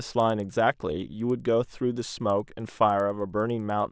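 From the first second to the last, a faint tick repeats ten times a second under the speech. This is a resampler restarted on every block. The conversion from 48 kHz to 16 kHz was done on 100 ms blocks, one at a time. At each block edge the filter lacked the real neighbouring samples. So every boundary carries a small error. The ticks follow the 100 ms spacing. They sound only while the speech is present.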